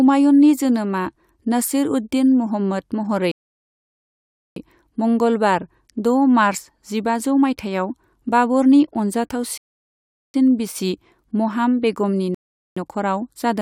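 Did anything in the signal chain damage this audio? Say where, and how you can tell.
Yes: a rebuffering stall at the playback stage, three times, at 3.32–4.56 s, 9.58–10.34 s and 12.35–12.77 s, adding about 1.25 s, 0.76 s and 0.42 s. In each case the player exhausted its downloaded audio and paused until more arrived. The speech drops to dead silence, a flat line on the waveform and a fully blank vertical band on the spectrogram, then resumes exactly where it stopped, with nothing skipped and only time added.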